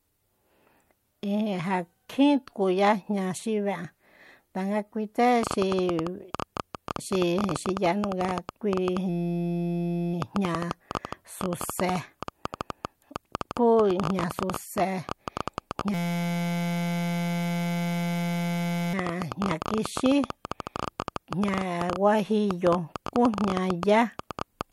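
From 5.43 s to the end, a train of clicks runs over the speech. There are about 11.8 clicks per second, unevenly spaced and alike in shape. They peak roughly 15 dB above the speech, so the ticking stays clear in the pauses too. The likely cause is interference from nearby equipment or a faulty connection or power supply injecting the same pulse again and again.

At 9.09 s the audio falls into a system hang loop until 10.14 s. The system stalled while the hardware kept replaying one 5.8 ms stretch from its ring buffer. The length fits a 256-sample buffer. It repeats 180 times at 172 Hz. It sounds like a steady buzz at that pitch. The same fault returns from 15.94 s to 18.94 s, with the same loop length and rate. This time it makes 516 repeats, so the buzz lasts about three seconds.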